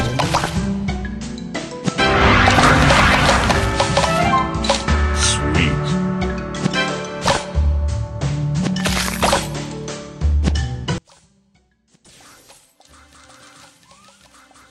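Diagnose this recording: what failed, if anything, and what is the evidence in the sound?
From 10.98 s to the end at 14.71 s the sound collapses to a faint, distant residue, about 33 dB down, with the centre gone. This is likely one channel inverted in the analogue wiring: with one leg's polarity reversed, summing to mono cancels everything common to both channels.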